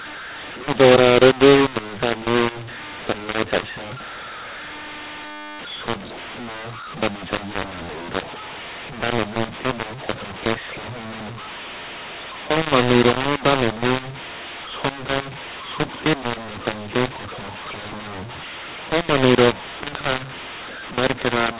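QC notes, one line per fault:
Throughout: mu-law and A-law mixed up. Telephone speech written with the mu-law curve is being decoded with the A-law curve, so each 8-bit code maps to the wrong level. Some samples come out too loud and others too quiet, giving a harsh, gritty distortion that rides on every syllable, and near-silent codes are lifted into an audible noise bed that fills the pauses. The narrow band, with nothing above 4 kHz and consistent with 8 kHz telephone sampling, is the expected G.711 limit rather than part of this fault.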